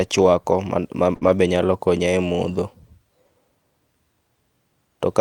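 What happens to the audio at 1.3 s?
Right around there, from 1.15 to 1.23 s, there's a burst of packet loss: the receiver stretches the last sound for about 58 ms as it fades, then skips ahead, so roughly 60 ms of speech is gone. Right after, from 1.23 to 1.29 s, you get lost packets rebuilt from error correction. Two packets were replayed from the low-bitrate copies in the following packets, so the 40 ms leading into "nyalo konya e modho" sounds rougher and noisier but has no gap.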